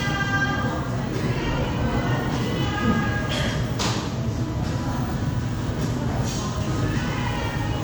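No technical faults can be heard anywhere in the audio.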